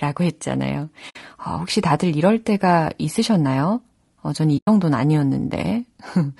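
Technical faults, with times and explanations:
Throughout: low-delay AAC compression. The speech sounds rough and grainy, with noise filling the gaps between harmonics and a thin, synthetic-sounding top band. This is likely short-frame AAC-ELD running near 32 kbps.
1.09–1.16 s and 4.57–4.68 s: AAC frame loss with muting. The sound fades out and back in. The first hole comes after "라고 했잖아요" and before "어 혹시 다들 이럴". The second comes after "이럴 때가 있으셨나요 어". The gaps, about 60 ms and 100 ms long, fit three and five lost frames zeroed by the decoder. Overlapping windows soften the edges, which sets this apart from a hard cut.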